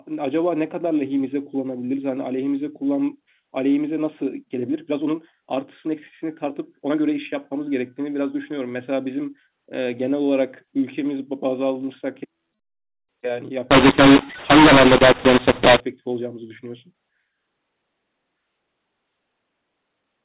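From 13.71 s to 15.80 s the speech turns suddenly harsh and gritty. Loud and soft parts come out at the wrong levels, and the gaps between syllables fill with a hiss that wasn't there before. This is mu-law and A-law mixed up: the telephone-band audio, limited to about 4 kHz as expected for 8 kHz G.711 coding, was written as A-law but read back as mu-law, so every sample value was mapped through the wrong curve.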